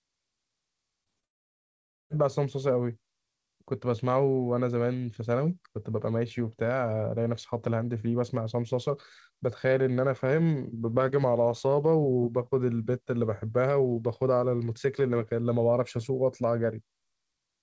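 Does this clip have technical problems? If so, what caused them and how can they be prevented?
Yes. At 1.04 s and again at 1.20 s the speech briefly smears and wobbles for a few hundredths of a second. This is short concealed packet loss: about 20 ms of audio arrived too late, and the receiver papered over each gap by extending the preceding sound. A larger jitter buffer and forward error correction would prevent this.

From 1.25 s to 2.12 s the speech drops out completely, leaving about 0.85 s of near-silence before it resumes without the missing part. This was likely a long network dropout, where no packets arrived for the whole stretch. Stabilising the connection, for example by using wired rather than congested wireless networking, would prevent this.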